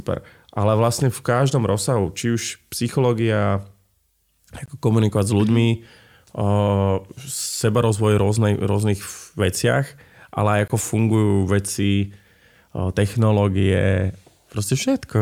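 At 4.66 to 4.68 s the speech stops dead for 20 ms, and the same hole returns at 10.68 to 10.70 s, between "ale aj" and "fungujú veci". This is a gap between chunks: the audio was split into 6-second blocks and silence was inserted at each join. Nothing is lost; the speech resumes exactly where it stopped. That continuity, the hard edges and the strict 6-second spacing set it apart from a dropout, which deletes sound.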